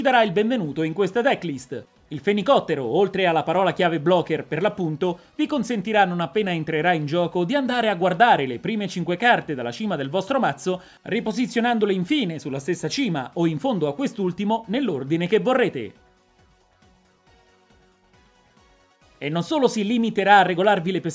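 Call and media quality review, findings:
No audible faults found in this recording.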